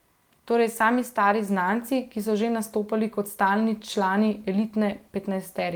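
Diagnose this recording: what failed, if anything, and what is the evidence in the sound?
Nothing failed; no audible defect in this speech recording points to any stage of the chain.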